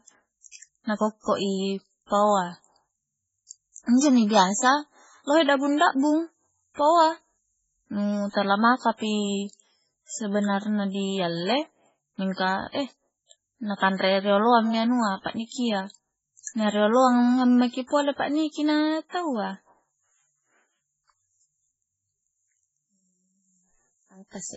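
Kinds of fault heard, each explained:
MP3 compression: throughout, the speech stops dead above 7.7 kHz and sounds heavily watery and swirly, which fits a very low bitrate near 16 kbps. Likely cause: a bit-starved encoder cutting the treble and dropping weak frequency lines that flicker frame to frame.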